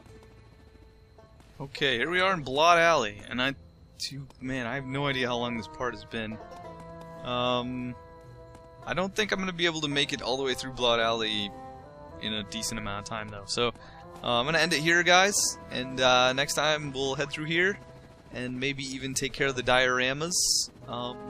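Nothing goes wrong anywhere in this recording, so there's no technical fault to point to at any moment.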